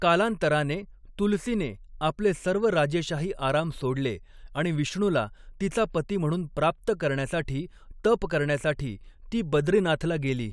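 Nothing in the speech recording stood out as a technical problem on listening.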